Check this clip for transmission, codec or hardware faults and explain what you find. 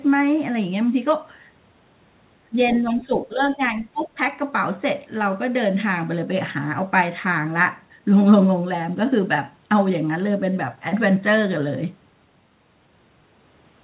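Two echo-control faults appear together early on, heard through a narrowband call path with nothing above 4 kHz, consistent with 64 kbps G.711 mu-law.

From 2.5 to 4.19 s there is speech suppressed in double talk. The speech dips by about 10 dB for roughly a second in total. The likely cause is the echo canceller ducking both talkers together. On the waveform this appears as pinched, uneven envelope sections.

From 2.73 to 2.96 s the other side's voice leaks through. A faint second voice sits about 25 dB below the speech, probably residual loudspeaker echo. On a spectrogram it shows as weak, separate harmonic traces.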